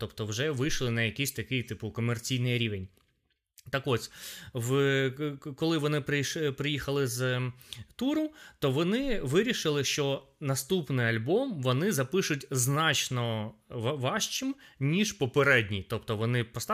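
At 2.44 s, just after "на якийсь такий типу", the speech abruptly runs about 5.75% fast and rises roughly a semitone (97 cents) until 3.73 s, then snaps back. At 15.08 s, after "вони запишуть значно важчим", it slows by 5.75% and drops about 103 cents until 15.71 s. The likely cause is a drift correction step, where clock-matching software briefly jumped the playback rate. On a spectrogram, the harmonic stack shifts up or down as a block with vertical edges. The waveform shows syllables squeezed or stretched over those spans.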